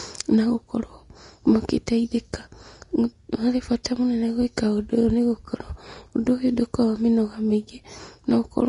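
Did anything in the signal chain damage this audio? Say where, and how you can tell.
Yes, at the codec stage, and it runs the whole way through the speech. Nothing comes through above about 10.6 kHz, and the treble turns hissy and grainy, with softened consonant attacks. That's likely Vorbis compression at a low setting, which fits roughly 34 kbps.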